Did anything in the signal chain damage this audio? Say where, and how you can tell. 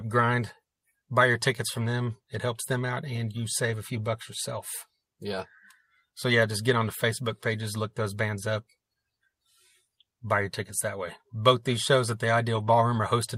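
Yes. At the network stage, lost packets were rebuilt from error correction from 12.55 to 12.69 s, just after "these shows at the". About 80 ms of speech turns rougher and noisier, which fits four 20 ms packets. The packet following each lost one carried a low-bitrate copy, and the decoder played that copy instead. Unlike a dropout or concealment there is no gap, smear or repeated sound, only a brief drop in coding quality.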